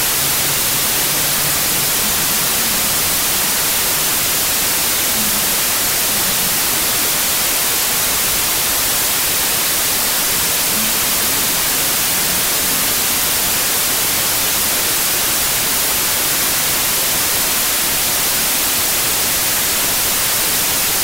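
Wrong sample width runs through the whole clip, from start to finish. The sound fits 32-bit integer samples being read as 16-bit ones. Each original sample splits into two values. One carries the top bits of the real signal, and the other is built from low-order bytes that amount to loud noise. The doubled sample count plays at 0.5 times speed, so the buried sound comes through slowed and an octave low under a heavy hiss.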